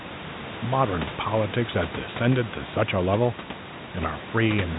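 A short recording of speech with nothing technically wrong in it. The room's own background noise sits about 14 dB under the speech, and the audio carries the narrow sound of G.711 telephone coding, with nothing above 3.8 kHz.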